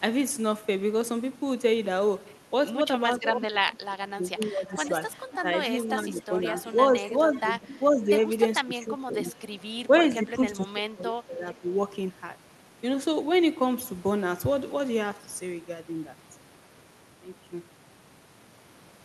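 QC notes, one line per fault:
3.19–4.93 s, 6.02–8.1 s, 8.6–9.22 s and 9.89–11.67 s, speech suppressed in double talk: the speech ducks. It drops by about 20 dB at its deepest in the first stretch and about 10 to 15 dB later on. The likely cause is the other side talking at the same time, so the echo canceller can't tell this talker from its loudspeaker echo and turns both down.
4.7–5.38 s, 6.6–6.66 s and 7.35–7.4 s, echo leak: a faint copy of the speech trails the original by 460 ms. It sits about 20 dB under the speech in the first stretch, then comes back as two brief scraps about 25 dB under. The likely cause is a speakerphone whose canceller let some of its microphone pickup through and sent it back down the line.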